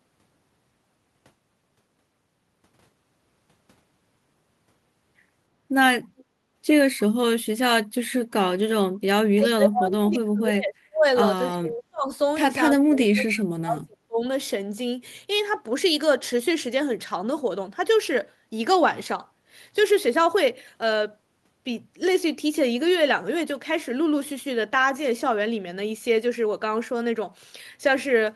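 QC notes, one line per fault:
6.17–6.24 s, echo leak: the far end's canceller likely let residual loudspeaker pickup return, so a faint copy comes back 306 ms late, about 30 dB down.
9.35–11.06 s, 11.49–12.1 s, 12.75–14.2 s, speech suppressed in double talk: during overlapping talk the canceller likely ducked the near talker too, dropping the speech by up to about 40 dB.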